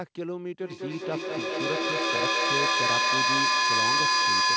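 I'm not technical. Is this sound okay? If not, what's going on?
No. This is feedback echo between two devices: two phones or computers in the same room were on the same call, and each microphone picked up what the other was playing. Neither device's echo canceller can remove sound coming from the other one, so the speech kept circling back. From 0.62 s to the end, the speech repeats about every fifth of a second, turning thin and ringing, and the repeats pile up until they're louder than the speech itself.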